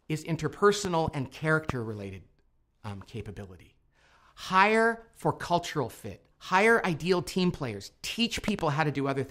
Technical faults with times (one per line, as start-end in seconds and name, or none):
0.85-1.10 loud pop
1.70-1.72 loud pop
8.48-8.61 loud pop